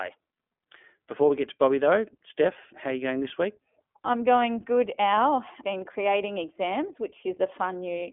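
Throughout, the speech carries iLBC codec damage: nothing above 3.7 kHz, and a rough, synthetic grain from 20 ms frames coded independently, fitting 15.2 kbps, unlike smooth band-limiting alone.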